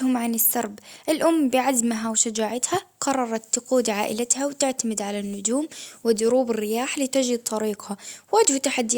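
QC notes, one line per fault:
No faults found in this speech clip. Nothing was heard that calls for a QC entry.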